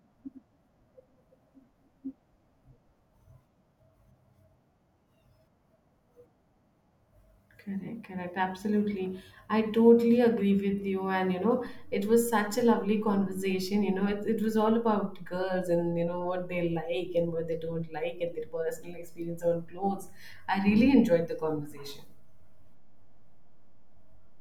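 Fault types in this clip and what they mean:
DC step: at 11.67 s the waveform's zero line jumps by about -42 dBFS and holds to the end, heard as a low thump, visible as a low-frequency spectrogram flash.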